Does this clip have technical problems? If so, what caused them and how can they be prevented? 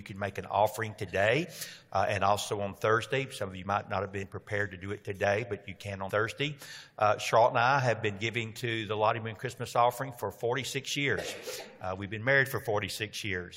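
Yes. Compressed frames skipped at 1.44, 4.23 and 6.09 s. Missing or rejected frames make the audio jump ahead by roughly 70, 40 and 100 ms. Check file integrity and use error-protected transfer.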